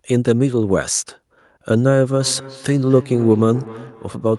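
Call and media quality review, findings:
Feedback echo between two devices, 2.2 s to end. Syllables return roughly every 0.3 s, about 17 dB below speech, thin and ringing. Second in-room device replays this mic; local canceller can't see it. Spectrogram: faded syllable copies, evenly spaced.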